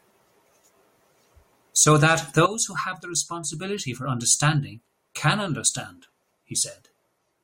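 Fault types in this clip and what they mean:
No technical faults can be heard in the speech recording: levels stay steady, and there are no dropouts, distortion, noise bursts or timing glitches.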